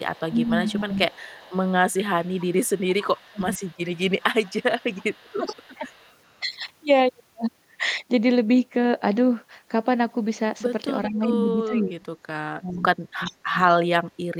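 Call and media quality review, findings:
Echo leak: delayed copy of the far-end voice about 0.41 s behind, 0.00–6.15 s at roughly 25 dB down, again 11.10–11.14 s (roughly 30 dB down) and 13.24–13.35 s (roughly 15 dB down). Likely cause: residual echo passing a loudspeaker-side echo canceller.

Speech suppressed in double talk: near talker dips or cuts out while the other side speaks, at 0.29–0.98 s (about 15 dB), 3.17–3.47 s (about 30 dB), 5.24–5.86 s (about 20 dB) and 11.08–13.58 s (about 35 dB). Likely the echo canceller attenuating both voices together.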